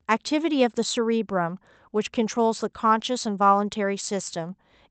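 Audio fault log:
The speech comes through the call path intact, with its top end stopping near 8 kHz as fits an Opus call codec at around 40 kbps, and the signal shows no dropouts, distortion or level problems.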